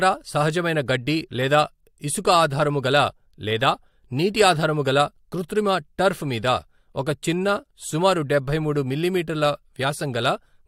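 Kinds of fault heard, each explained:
No audible faults heard.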